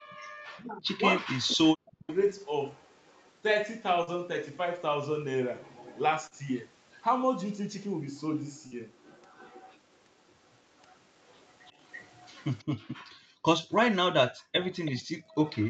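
From 0.07 to 2.08 s, the speech is suppressed in double talk. The level dips by up to about 40 dB, for roughly 1.5 s in all. The likely cause is both sides talking at once. The echo canceller could not tell its own talker from the loudspeaker echo, so it turned both down.

From 2.1 to 3.31 s there is an echo leak. A copy of the speech returns 0.33 s late. It is faint, about 35 dB under the speech. It recurs from 5.62 to 7.03 s and from 8.18 to 13.78 s at about 25 dB down, and from 14.7 s to the end at about 20 dB down. The likely cause is a loudspeaker on one side of the call. Its echo canceller let part of the microphone pickup through, and that was sent back.

Short concealed packet losses occur at 4.03, 6.27 and 8.67 s. In each, about 40 ms of the call arrived too late for the decoder. The receiver filled roughly 35 to 42 ms by extending the last sound, then blended back in. Each one is heard as a brief smear or wobble.

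From 12.69 s to the end, the background is gated by the echo canceller. While the loudspeaker played, the canceller pulled the microphone down hard, by up to about 40 dB. The room sound dips or drops out.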